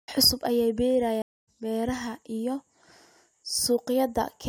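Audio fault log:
1.22 to 1.48 s, stream reconnect: the link dropped for about a quarter second, then a fresh decoder picked up roughly 0.2 s further on, resuming at "beeraha iyo".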